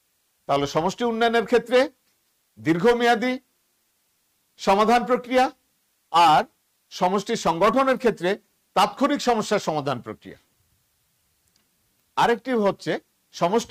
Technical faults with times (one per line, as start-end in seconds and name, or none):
0.00-13.70 low bit depth with dither